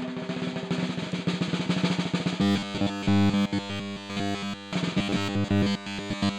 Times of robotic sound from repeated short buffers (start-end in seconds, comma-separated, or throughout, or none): 2.42-4.73, 4.98-6.38